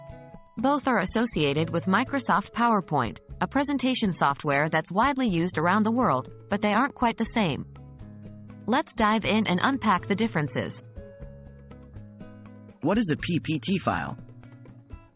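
Nothing goes wrong anywhere in the clip; there's no fault to point to at any moment.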